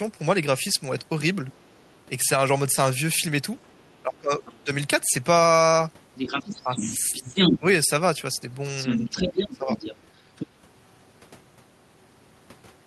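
At 3.73 s a faint second voice slips in for a moment. This is the other side's voice leaking through. The far talker is likely playing from a loudspeaker, and the echo canceller has left a residue in the microphone signal. It is very quiet here, far below the main voice. From 4.02 to 4.7 s the talker's voice sinks by up to about 20 dB. This is speech suppressed in double talk. Both sides are likely speaking together, and the canceller turns everything down because it cannot tell them apart. Inside that dip, from 4.45 to 4.59 s, the leak returns, still faint. From 6.15 to 7.59 s it comes back much stronger, as loud as the talker. Suppression follows from 6.64 to 7.66 s, pulling the voice down by up to about 10 dB. From 8.77 to 10.47 s the leak is nearly as loud as the talker again. The voice dips slightly from 8.98 to 9.11 s, then by up to about 15 dB from 9.48 to 9.8 s.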